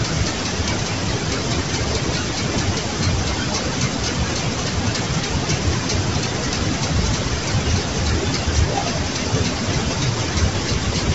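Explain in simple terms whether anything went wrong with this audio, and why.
Yes, the speech sounds rough and grainy throughout, with nothing above about 7.8 kHz, likely from low-delay AAC compression. The roughness between pitch tones sets it apart from plain muffling.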